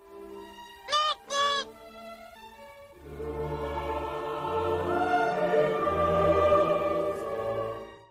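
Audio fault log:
2.35–2.37 s, skip ahead: Playback jumps forward with no fill, so about a second of sound never plays and the material on either side of the jump is joined almost directly. Later audio was already queued when this stretch was lost, either in transit or discarded by an overflowing jitter buffer, so the receiver moved straight on. The delay drops by roughly a second, and the join sounds like an abrupt cut rather than a pause.
2.45–3.00 s and 5.54–6.68 s, jitter buffer speed-up: The receiver was holding more audio than its target, so it trimmed short pieces of one or a few pitch periods, many times in a row, to bring the delay down. Pitch stays the same but the sound runs fast. The first run plays at 117% and removes around a tenth of a second, which is clearly hurried. The second, at 103%, removes about half that.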